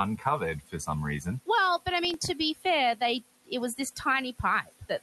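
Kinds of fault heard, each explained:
Noise suppressor artifacts: The suppressor turns down each band it judges to be steady noise, frame by frame. Here the room noise sits about 18 dB under the speech. The suppressor cuts it by about 15 dB, so the background sinks between phrases and rises beneath them.
Speech cut by the noise suppressor: The suppressor mistakes some speech for noise and lowers it with the background. This happens near 0.61 to 0.88 s, 2.55 to 2.65 s and 4.64 to 4.9 s. Drops of about 15, 12 and 18 dB leave those moments faint or swallowed.
Processor overload crackle: The processor misses a run of buffer deadlines, and each miss leaves a tiny gap of silence. Between 2.05 and 2.28 s about ten such gaps cluster, which fits a buffer well under a millisecond long. They are heard as a short gritty crackle over the speech.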